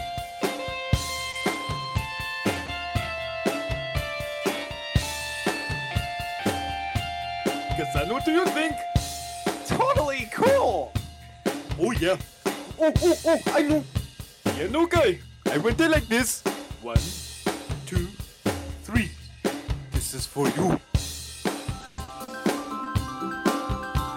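The audio has a burst of network damage between 1.31 and 2.92 s and a longer breakdown near the end. At 1.31 to 1.35 s a short stall from a late packet holds the current sound for 20 ms. The jitter buffer ran dry, the receiver stretched the last frame until the packet turned up, and playback resumed from the same point. Nothing is lost, but the sound drags briefly and the delay grows by 20 ms. Across the same stretch, nine lost packets are rebuilt from error correction, each a 20 ms frame, between 1.33 and 2.92 s. The next packet carried a low-bitrate copy of each one, so there are no gaps, but those frames come through rougher and grainier than the surrounding audio. At 2.66 to 2.70 s a short concealed packet loss drops 20 ms outright. The decoder fills it by extending the preceding sound and blending back, which leaves a small smear or wobble. From 21.81 to 22.88 s, repeated packet loss gives a choppy, robotic texture. 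Five separate holes total 220 ms of missing audio, the longest being 120 ms, and about a fifth of that span is patched by concealment. Around a tenth of a second is rebuilt from error-correction copies.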